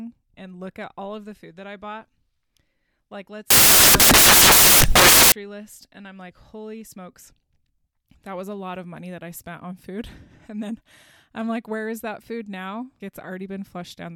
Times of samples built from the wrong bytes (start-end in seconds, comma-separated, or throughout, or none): 3.50-5.32